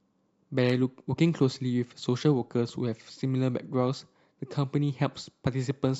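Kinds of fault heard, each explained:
No faults detected on listening; nothing to list for this speech recording.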